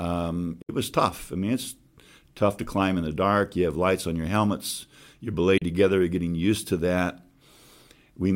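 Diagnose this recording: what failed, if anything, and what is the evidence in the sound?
Digital broadcast dropout in reception: speech fades out over 8 ms and mutes at 0.62 to 0.70 s and 5.58 to 5.62 s. Each gap is a full-band blank column on the spectrogram, and the missing audio never returns.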